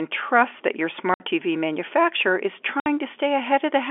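Packet loss filled with silence cuts the speech twice, at 1.14 s just after "trust that your" and at 2.80 s just after "manufacturer is", each hole lasting 60 ms, which fits three consecutive 20 ms packets going missing. The receiver had nothing to play and put pure silence in their place, so the sound drops out abruptly and resumes with hard edges, standing out against the narrow telephone band of the G.711 line.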